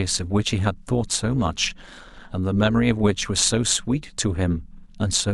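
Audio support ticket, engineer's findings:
Overlap-add ripple across the entire speech clip. Metallic buzz with extra tones around each note, level pumping about 6 dB at around 200 Hz. Probable component: frame-based processing stage, synthesis window and hop not summing to constant gain, so level dips once per frame. Distinct from slow tremolo or gain pumping: the rate is steady, too fast to follow the speech, and never varies.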